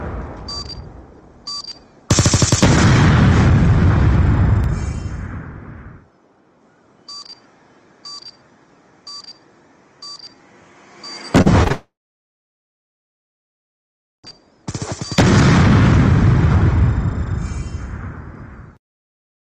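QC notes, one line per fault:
11.41–11.48 s, 11.64–11.68 s and 11.68–11.72 s, short concealed packet loss: three brief holes of about 40 ms, 20 ms and 20 ms were filled by extending the preceding sound and blending back, heard as small smears or wobbles that could swallow a short transient.
11.72–14.26 s, long network dropout: the sound gives way to a brief fading continuation of its last moment, then about 2.3 s of silence before audio resumes. About 2.5 s of material is missing, likely from a network outage on the link.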